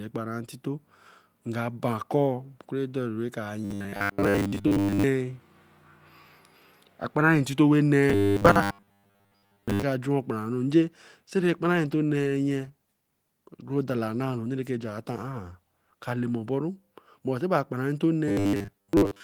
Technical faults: robotic sound from repeated short buffers; call bitrate drop

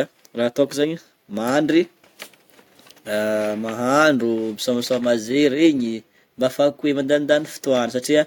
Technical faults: clock slip clicks

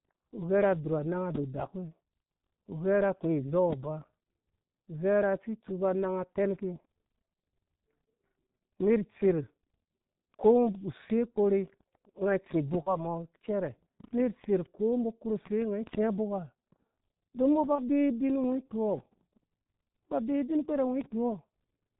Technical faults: G.723.1 codec; VoIP packet loss concealed by the speech codec

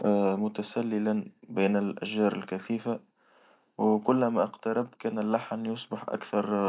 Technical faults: none

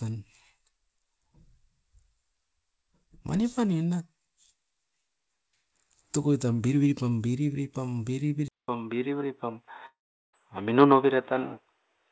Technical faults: input switched to a poorer device; long network dropout

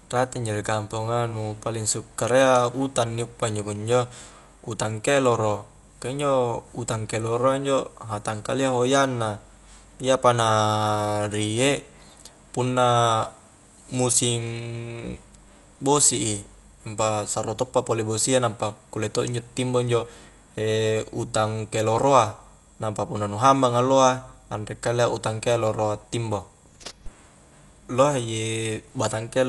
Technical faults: Dolby Digital compression

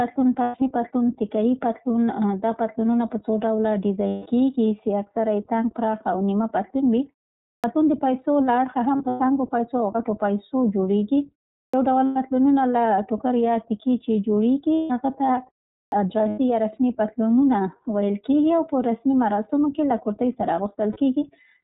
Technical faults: iLBC codec; lost iLBC frames; clipped start after a pause

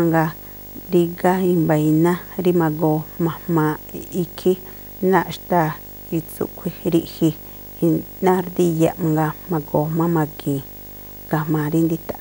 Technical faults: video or display buzz

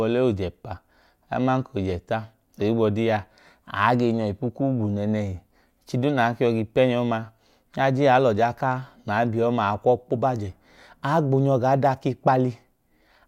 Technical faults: none

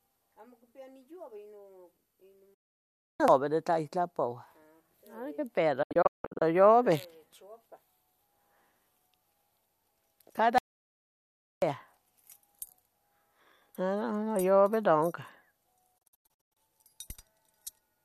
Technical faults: digital broadcast dropout; audio dropout to silence

